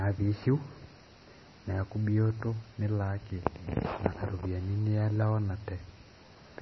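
From start to end the speech carries heavy damage typical of MP3 compression, likely from encoding at a very low bitrate, in the region of 22 kbps. Nothing sounds above about 5.9 kHz, where the encoder has cut the treble outright, so sibilants lose their edge and the top end sounds dull. Starved of bits, weak frequency lines drop in and out from frame to frame, giving a watery, swirling texture with metallic chirps on s sounds and softened, smeared onsets.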